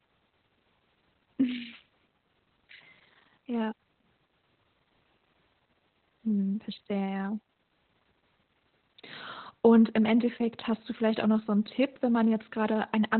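Speech runs through heavy Opus voice compression for the whole clip: a narrowband linear-prediction coder rebuilds the voice coarsely, leaving it muffled, hoarse and slightly robotic, which fits a rate near 8 kbps. A spectrogram shows a hard ceiling with nothing above 4.2 kHz.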